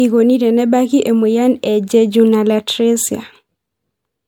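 A speech recording with generation loss across its whole length. The sound is swirly and hollow, with a smeared, watery texture and softened consonant attacks, which is more damage than a single encode at this quality would cause. The likely cause is repeated lossy coding: the character fits about three MP3 passes at roughly 96 to 98 kbit/s, each requantising on a shifted frame grid so noise and spectral gaps accumulate. Content extends up to 20 kHz.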